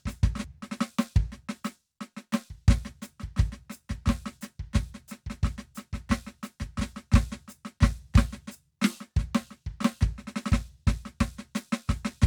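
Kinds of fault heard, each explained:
Damaged data in a compressed stream: a corrupted patch in the encoded music makes the decoder lose sync briefly, giving a quick blip right at 0.44 s.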